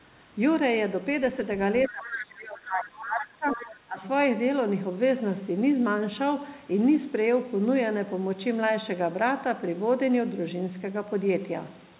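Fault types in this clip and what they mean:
Other side's voice leaking through: A second, quieter voice comes through at three points: 1.84 to 2.1 s, a short scrap around 3.01 to 3.05 s, and again from 3.51 to 3.69 s. It sits about 15 dB below the main talker. This is likely the far end playing on the talker's loudspeaker and getting back into the microphone because the echo canceller didn't fully remove it.
Speech suppressed in double talk: From about 1.89 to 4.03 s, right as that other voice is coming in, the main talker keeps ducking and dropping out in pieces. Across roughly two seconds the level dips by as much as 20 dB. The likely cause is both sides talking at once, so the echo canceller couldn't separate its own talker from the loudspeaker echo and pulled everything down together.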